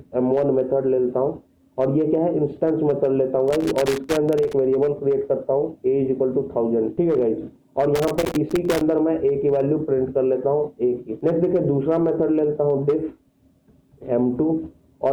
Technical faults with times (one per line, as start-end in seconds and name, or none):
3.48-4.53 loose connector crackle
7.95-8.81 loose connector crackle